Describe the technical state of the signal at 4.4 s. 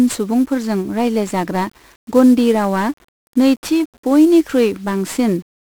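At 4.4 s the speech sounds fuzzy and crackly, with a dense broadband hiss that swamps the treble. This is 1-bit DFPWM compression, and it runs through the whole clip rather than starting at that moment. Each sample is stored as a single bit that nudges an adaptive level up or down, which fits a stream of about 48 kbps. The resulting quantisation noise is heavy and spread across the spectrum.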